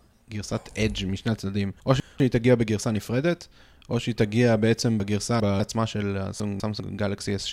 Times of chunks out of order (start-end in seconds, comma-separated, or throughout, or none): 1.80-2.20, 5.00-5.60, 6.40-6.80